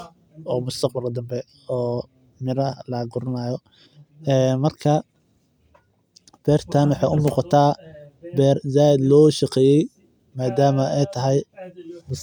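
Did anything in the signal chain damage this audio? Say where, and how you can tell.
Yes. At 3.64 s there is an underrun with held sample at the driver or buffer stage. For about 1.3 ms the speech waveform freezes flat at its last value, which fits a 64-sample gap at 48 kHz. Almost no audio is lost, so playback resumes where it stopped. A dropout to zero would pull the waveform to silence and give a sharper click.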